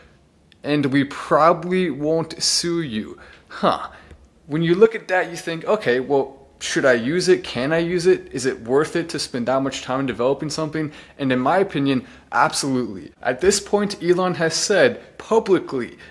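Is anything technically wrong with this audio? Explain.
No, nothing is technically wrong with this audio.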